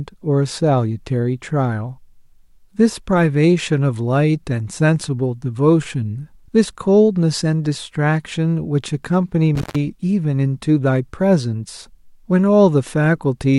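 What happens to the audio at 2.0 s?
At 2.0 s the speech carries on intact, with no audible fault at that moment.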